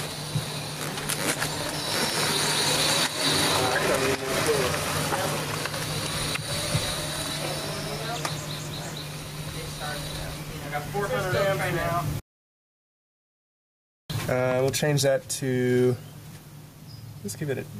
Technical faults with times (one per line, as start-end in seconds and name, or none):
0.00-17.80 gain pumping